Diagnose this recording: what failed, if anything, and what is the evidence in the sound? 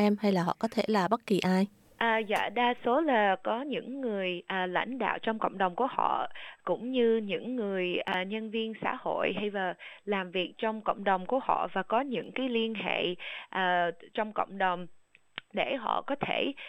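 Chunks out of order at 8.08–8.14 s and 12.24–12.28 s, at the network or jitter-buffer stage. Each spot is a brief jumbled flutter with three hard joins. A 20 ms block, which fits 20 ms packets, plays two blocks late, then one block late.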